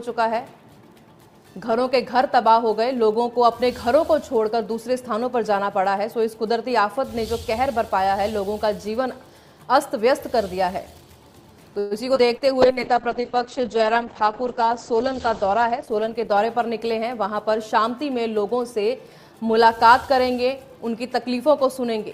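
From 11.79 to 11.94 s there is a call audio freeze. The last sound is stretched into a short fading buzz or hiss for about 113 ms, and then the audio resumes exactly where it stopped, with nothing lost. This most likely comes from packets arriving late and the jitter buffer running dry, which adds that much delay.

Short concealed packet loss follows at 12.15–12.18 s and again at 12.37–12.44 s. Each time, about 40 ms of audio never reached the decoder. The receiver bridged the gaps with only 8 ms and 35 ms of synthesized continuation, which leaves a quick smear or wobble. The first loss also cuts the delay by roughly 30 ms.

Overlapping this, a jitter buffer slow-down runs from 12.21 to 12.74 s. The receiver repeats pitch periods to rebuild its reserve, adding 44 ms, so playback drops to 93 % speed at unchanged pitch. Sounds are slightly drawn out.

A call bitrate drop starts at 12.62 s and lasts until 18.70 s. 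The encoder rate falls from 128 kbps to 9 kbps and stays at the bottom for about 2.8 s. The audio bandwidth narrows from 20 kHz to 8 kHz, and the sound turns muffled, coarse and watery.

Within that stretch, a jitter buffer speed-up from 14.92 to 16.70 s removes roughly 100 ms of pitch periods to trim excess delay. Playback runs at 106 % speed at the same pitch and sounds slightly hurried.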